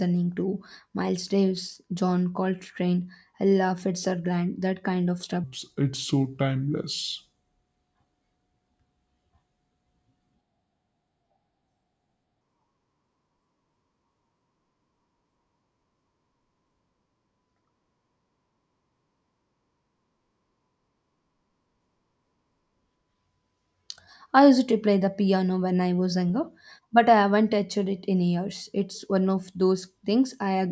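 Speech recording with a wrong sample rate from 5.44 to 12.41 s. Playback runs slower than capture, which fits 22 kHz audio played at 16 kHz, so speech slows to 0.73 times normal speed and drops about 5.5 semitones.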